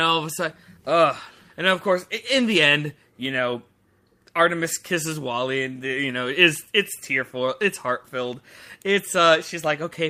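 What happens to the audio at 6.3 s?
Nothing goes wrong at 6.3 s; the speech there plays through intact, with no dropout, click, distortion or other fault.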